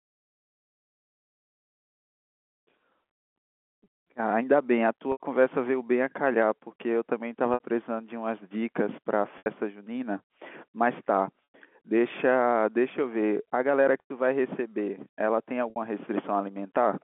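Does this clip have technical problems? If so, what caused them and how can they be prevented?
Yes: packet loss with pitch repetition at 3.84, 5.12, 7.54, 9.38, 11.53, 14.0 and 15.7 s, the first scattered over about half a second. The receiver replays the last pitch period to fill the gaps of 60–100 ms, 260 ms in all for the first, giving brief buzzy, held sounds over the narrowband G.711 line. A jitter buffer and redundant or FEC-protected packets would prevent this.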